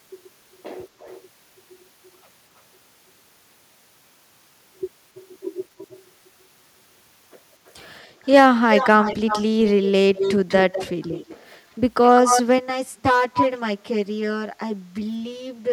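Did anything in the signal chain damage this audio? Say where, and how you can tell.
Yes. Echo leak in call processing, likely from a far-end speakerphone's echo canceller: discrete delayed copies, not diffuse reverb. They come at 326 ms (0.99, 5.15, 5.78, 7.66, 8.23 s, about −25 to −35 dB) and at 201 ms (8.75–11.58, 12.07, 13.35 s, near speech level).

Channel delay (comb filtering) at the driver or buffer stage, from 12.58 s to the end: one channel about 10 ms late, summed to mono. The sound is hollow, with fixed notches from about 50 Hz.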